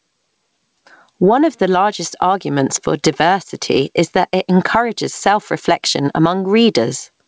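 Gain pumping runs through the whole speech clip. The level pumps with a swing of roughly 15 dB. Dynamics sound squashed. The likely cause is input gain set far too high, with a fast limiter clamping it.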